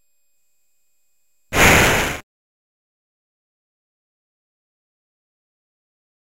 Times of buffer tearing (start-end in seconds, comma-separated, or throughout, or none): 0.36-4.04